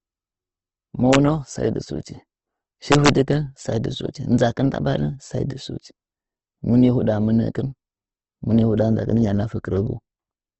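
From start to finish the speech has a grainy, rough texture, and there's nothing at all above 8.2 kHz, so it sits in a wideband box. That's most likely Opus compression in its music-style mode at a low rate, somewhere around 16 kbps. The encoder keeps each band's energy but fills the starved ones with folded or noisy content, so you get noisy grit rather than swirly holes.

Then there are two integer overflow hits, both just before "sai dɨ". The first runs from 1.13 to 1.15 s, with the peak only barely reaching the limit. The second, from 2.92 to 3.09 s, pushes about 4 dB past the limit. In both, the sample values wrap around to the opposite sign instead of being held at the top. Every overshooting peak slams across the full range, so these come through as violent cracks, far harsher than ordinary clipping.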